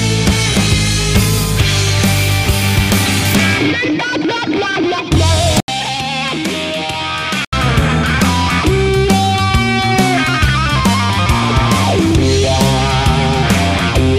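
An input switch to a poorer device runs from 5.60 to 7.53 s. After an 80 ms gap, the sound turns duller and somewhat quieter, with nothing above 13 kHz and a faint new background noise, likely from recording briefly moving to a lesser microphone.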